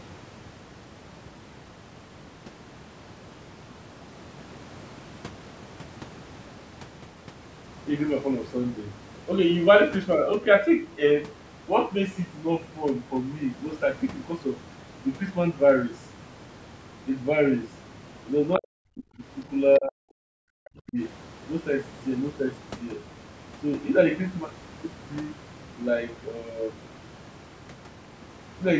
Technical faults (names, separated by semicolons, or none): speech suppressed in double talk